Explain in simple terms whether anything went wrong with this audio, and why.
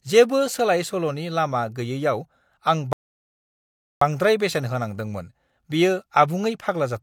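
Yes, something went wrong: a rebuffering stall. At 2.93 s the speech goes silent for about 1.1 s, then picks up at 4.01 s exactly where it stopped. Unlike a dropout, no speech is missing; the player simply ran out of downloaded audio and waited.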